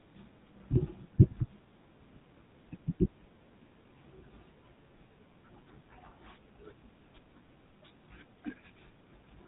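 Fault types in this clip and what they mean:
GSM full-rate codec: The speech passed through the original GSM mobile codec, which models the vocal tract as a filter and drives it with a coarse train of regular pulses, keeping only a third of the excitation detail. That lossy rebuild, at a rate that fits the standard 13 kbps, is plainly audible throughout as a buzzy, gravelly roughness on the voice, and the band stops near 3.8 kHz, leaving the speech dull and boxed-in.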